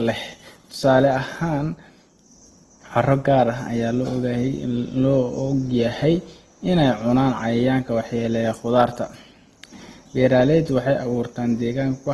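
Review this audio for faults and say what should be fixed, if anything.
Opus compression, likely, affects the whole clip from start to finish. The speech has a rough, grainy texture in place of clean tone, and nothing sounds above about 12.2 kHz. That pattern fits Opus running in its music-oriented mode at a low rate, something near 16 kbps. The encoder keeps each band's overall energy but, starved of bits, refills band detail by folding lower bands or inserting noise, which makes harmonics sound hashy rather than hollow. To prevent it, encode from the original source at a higher Opus bitrate or keep a lossless copy for editing.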